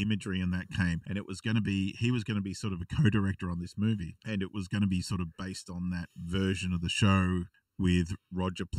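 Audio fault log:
Throughout, channel delay (comb filtering): one channel arrives late by a fraction of a millisecond, and summing to mono cancels shared content at evenly spaced frequencies starting near 700 Hz, cutting fixed notches through the speech and giving it a hollow, phasey colour.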